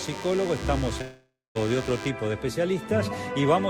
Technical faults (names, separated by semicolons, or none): DECT cordless phone buzz; long network dropout